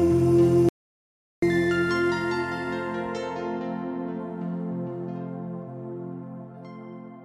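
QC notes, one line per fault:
0.69–1.42 s, audio dropout to silence: the sound stops abruptly mid-flow and returns just as suddenly after about 0.74 s of silence with no room tone. That sets it apart from a gate or fade, and likely points to a lost input link.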